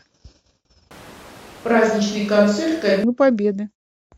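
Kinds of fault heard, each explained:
Switch to a distant microphone: from 0.91 s to 3.04 s the speech abruptly turns roomy and hollow, with thinner bass and a background noise floor about 25 dB below the speech, then snaps back. The likely cause is the close microphone dropping out in favour of one further away. Loudness stays roughly the same. A spectrogram shows weaker low frequencies, smeared reverberant tails and raised noise between syllables; the waveform shows gaps filled in, with hard edges at both switches.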